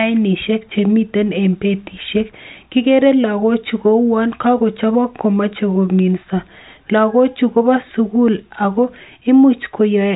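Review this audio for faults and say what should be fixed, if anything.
Nothing needs fixing: the speech has the telephone band of a G.726 ADPCM link, stopping near 3.8 kHz, and the coding hiss that tracks the speech level is faint at most, which fits the 40 kbit/s mode.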